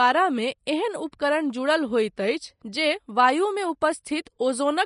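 The speech has most likely passed through Vorbis compression at a low setting, consistent with roughly 32 kbps, and the damage runs for the whole clip. The encoder has discarded everything above 10.5 kHz and quantised the remaining upper band so coarsely that its fine detail is replaced by noise of similar energy. The result is a dull top end over a hissy, grainy texture, with roughened tones and softened consonant attacks.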